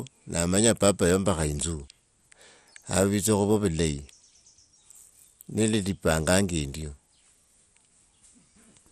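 From start to finish the speech sounds dull, with a gurgling, granular roughness, and nothing reaches above 14.4 kHz. This is most likely MP2 compression at a starved bitrate, which fits a rate near 64 kbps: the coder splits the signal into 32 fixed sub-bands, switches off whole upper bands, and coarsely quantises the rest. Unlike a simple low-pass filter, the remaining bands flicker and grind rather than just losing brightness cleanly.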